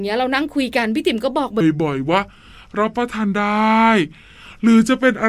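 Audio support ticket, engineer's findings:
Section at the wrong speed, 1.61 s to end of clip. Speech abruptly drops to 0.765x speed, pitch about five semitones lower, slow and deep. Likely a resampling or clock mismatch in playback or editing. Unlike a pitch shift, tempo and pitch fall together.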